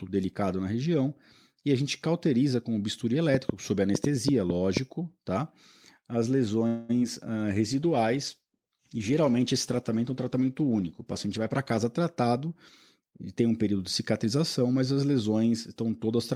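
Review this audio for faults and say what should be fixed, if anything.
A train of clicks runs from 3.35 to 4.78 s, just after "cauteriza com o bisturi": about seven similar pops at an irregular 4.2 per second, some 20 dB above the speech. The likely cause is interference or a faulty connection or power supply injecting pulses. Unlike packet-loss ticks, these share one shape and continue through pauses. Shielding the cabling and checking the audio interface and its power would prevent it.

A call audio freeze occurs from 6.67 to 6.91 s. The last sound is stretched into a fading buzz for 216 ms, then the speech resumes exactly where it stopped. Packets were likely held up in transit until the jitter buffer ran dry. Nothing is lost, only delayed, which separates it from packet loss. A steadier network path or a deeper jitter buffer would prevent it.

Short concealed packet loss follows at 6.99 to 7.03 s. 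About 20 ms of audio never arrived and 16 ms of synthesized continuation was blended in, giving a brief smear. Unlike the freeze, real speech is missing here rather than postponed. Forward error correction or redundancy would prevent it.

A call bitrate drop from 64 to 19 kbps spans 7.45 to 11.85 s, sitting at the low rate for 4.38 s. The encoder codes coarsely and trims high frequencies, so speech turns rough and muffled. This differs from a plain filter because of the watery coding texture. Better bandwidth provisioning or a higher minimum bitrate would prevent it.

A jitter buffer speed-up from 11.26 to 12.21 s plays the speech at 106 % speed, cutting out roughly 70 ms in small pitch-period slices to reduce the backlog. Pitch stays unchanged, which distinguishes it from resampling, and the speech sounds hurried. Smoother packet delivery or gentler buffer adaptation would prevent it.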